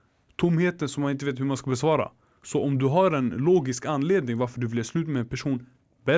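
No technical faults can be heard anywhere in the speech recording; the signal holds steady throughout, with nothing disturbing it at any point.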